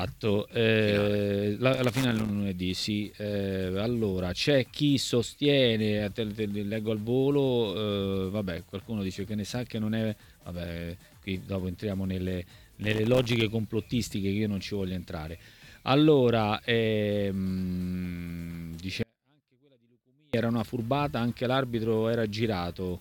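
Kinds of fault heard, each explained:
Loose connector crackle: A worn or dirty contact intermittently opening and closing chops the signal, and any DC on the line adds pops. Here it produces two irregular bursts of scratchy crackle, from 1.74 to 2.30 s and from 12.84 to 13.42 s, each lasting roughly 0.6 s.
Audio dropout to a faint residue: The sound cuts out abruptly at 19.03 s and returns at 20.34 s, a gap of about 1.31 s. The gap holds only a faint trace of the sound, around 40 dB below its normal level, which points to a likely break upstream while the later stages stayed live.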